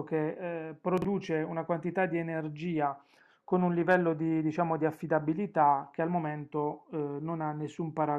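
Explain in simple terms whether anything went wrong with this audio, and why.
Something did go wrong, once, between 0.98 and 1.05 seconds. This is chunks out of order. One short piece of sound, about 23 milliseconds long, arrived two pieces late. So the speech briefly sounds jumbled. There are three sharp joins.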